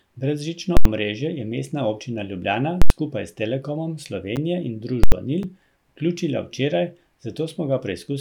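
A speech recording with invalid numbers at full scale three times, at 0.77 to 0.85 s (just before "omrežje je"), 2.82 to 2.90 s (just before "skupaj s") and 5.04 to 5.12 s. Each is an 85 ms burst pinned at one extreme value, far beyond the speech peaks, which fits a 4096-sample block. It is heard as a loud pop at each edge with nothing between. A dropout would be quiet, and these blocks hold a value far from zero. There are also two blocks of digital silence, at 4.36 s (8 ms) and 5.43 s (about 9 ms). Here the output buffer was most likely left unfilled and zeroed. The sound cuts to silence and back with no fade, so each is a brief tick rather than a loud bang.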